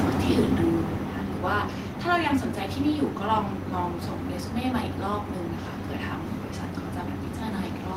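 Automatic gain falling runs from 0.05 to 1.71 s in this speech clip. The automatic gain control judged the incoming level too hot or its background noise too strong and pulled its gain down over that stretch, by about 9 dB in total. The opening sounds loud and then settles lower as the reduction takes hold, and the background sinks along with the voice because the whole signal is being turned down rather than any single part of it.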